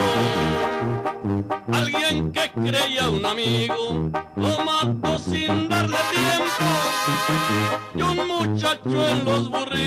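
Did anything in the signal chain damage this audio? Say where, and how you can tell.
No, no signal-chain damage heard.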